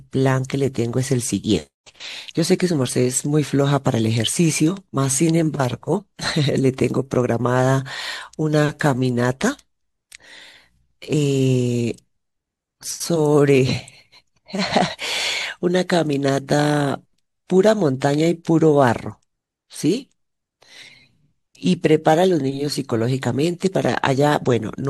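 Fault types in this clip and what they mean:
The speech signal is continuous and stable throughout, with no dropouts, distortion, level jumps or interruptions to be heard.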